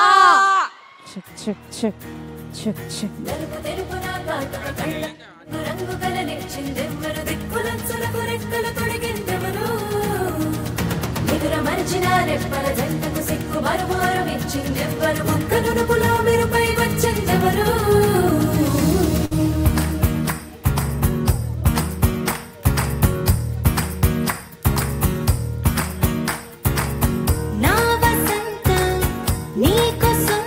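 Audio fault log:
19.25 to 19.33 s, burst of packet loss: a short run of consecutive packets failed to arrive in time for playback, so the receiver covered the hole by extending the last sound it had and fading it down for about 55 ms. That produces a brief smeared, decaying tail in place of fresh audio. Playback then picks up further along, and about 60 ms of the original sound is skipped, so the resumption lands with a small jump forward.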